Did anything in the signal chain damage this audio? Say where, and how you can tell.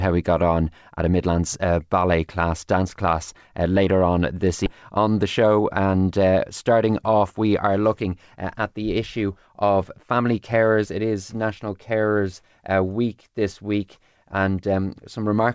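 Yes. At about 4.66 s, right after "uh later on this", the audio shows a skip ahead in the network and jitter-buffer stage. Roughly a second of speech is gone, and the two sides are butted together with no silence and no concealment fill. A packet-loss dropout would leave a gap or a smeared stretch. Here the timeline jumps forward, so the buffer discarded queued audio and cut its delay by about a second.

From 5.44 to 5.94 s, just before "uh starting off we", there is a jitter buffer speed-up in the same receive stage. The speech runs about 10% fast, and about 70 ms is trimmed away in small pitch-period slices, so it sounds hurried while the pitch stays put. That unchanged pitch rules out a sample-rate mismatch, which would raise pitch and tempo together. The G.722 call path, with nothing above 8 kHz, carries this audio, and its band limit is not the cause.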